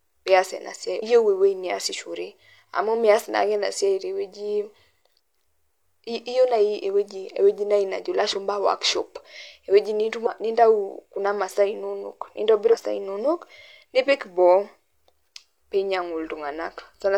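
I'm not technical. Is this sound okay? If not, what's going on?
No. There are three short glitches, at 0.98 to 1.03 s, at 10.22 to 10.27 s just after "najo ilashumpa workshop ewueji", and at 12.68 to 12.74 s. This is damaged data in a compressed stream. Part of the file got scrambled, so the player stumbled and lost its place.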